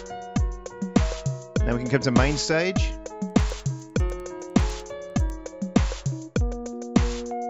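From 3.3 to 5.3 s, ticks repeat at 10 Hz. The resampler restarted on every block, so each 100 ms edge carries an error.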